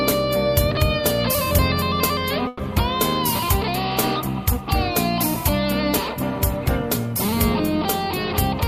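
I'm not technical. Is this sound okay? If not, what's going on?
No. At 2.47 to 2.62 s, a burst of packet loss dropped a run of data, so the last sound is stretched and faded for about 120 ms, then skips ahead.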